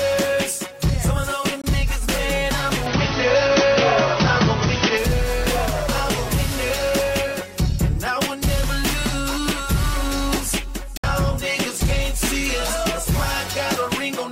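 From 1.62 to 1.64 s the audio cuts to a brief silence of about 20 ms, likely a Bluetooth dropout consistent with one lost packet. At 10.97 to 11.04 s a second hole of about 61 ms follows, fitting three lost packets; both times the sound resumes further along, as if it had kept playing.

Between 2.86 and 4.97 s the input switched to a poorer device, likely a different microphone or headset call profile. Nothing above 6.2 kHz passes, so the sound turns duller, with new background noise roughly 45 dB below the signal, no gap at the switch and no obvious level change.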